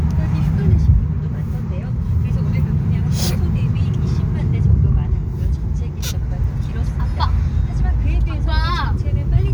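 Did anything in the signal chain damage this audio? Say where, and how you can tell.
No, nothing along the signal chain has left an audible mark on this recording of sounds; it is free of faults throughout.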